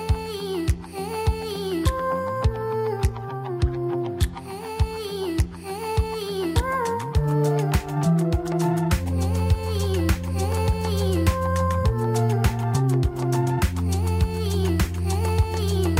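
No technical faults can be heard anywhere in this audio. There is nothing to mark at any point in the recording.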